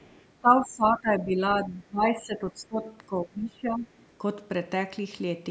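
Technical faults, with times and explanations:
0.0–0.25 s, 1.09–1.13 s and 1.53–1.71 s: other side's voice leaking through, a faint second voice underneath, about 35, 25 and 20 dB below the talker. This is likely loudspeaker echo the canceller left behind. It differs from crosstalk because it comes from the loudspeaker into the microphone.
0.41–1.4 s, 1.63–2.81 s and 3.07–3.87 s: speech suppressed in double talk, where the talker's level sinks by roughly 15 to 20 dB in patches. This is likely the echo canceller ducking everything while both sides spoke. It is not a gain fault, because the dips follow the overlap.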